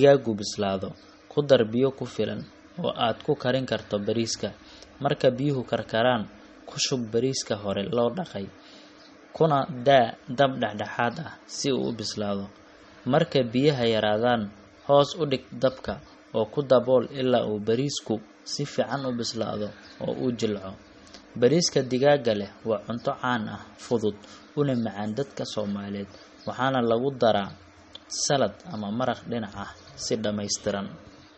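Throughout the speech, the treble stops dead at about 8.4 kHz, a flat ceiling on a spectrogram, and s sounds turn watery and swirly as weak bands flicker on and off. This is likely MP3 compression starved of bits, fitting roughly 32 kbps.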